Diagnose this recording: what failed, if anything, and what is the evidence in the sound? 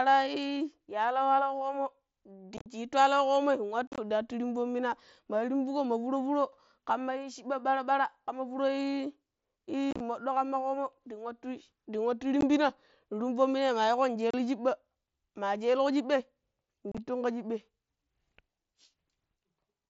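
The Bluetooth link between headset and phone dropped voice packets, and nothing concealed them: unconcealed Bluetooth headset packet loss. Holes with abrupt edges appear at 2.57–2.66, 3.87–3.98, 9.91–10.00, 12.41, 14.31–14.34 and 16.92–16.98 s. The longer ones are scattered clusters with runs up to 45 ms, so they sound chopped and crackly rather than like one clean gap. Concealment would smear or repeat sound across the holes instead of leaving them silent. Through all of this, the wideband mSBC path still carries speech up to 8 kHz.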